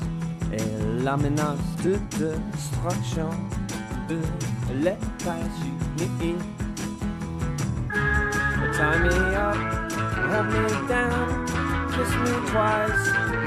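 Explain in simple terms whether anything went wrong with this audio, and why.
Compressed frames skipped: at 1.84–1.87 s, 4.09 s and 7.76 s the audio jumps ahead by roughly a twentieth of a second, a little more at 4.09 s. Unlike a dropout, there's no silent gap.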